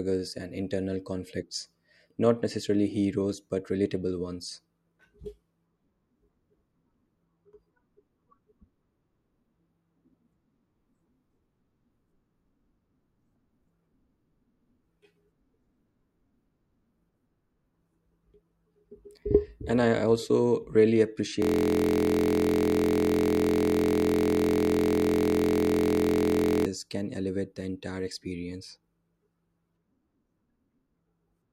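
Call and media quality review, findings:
Steady buzz at about 43 Hz replacing the speech, 21.42–26.66 s, after "also really", until "can elevate the entire". System hang loop: host or driver stalled while the audio device kept replaying one 23.22 ms buffer, which fits a 1024-sample ring.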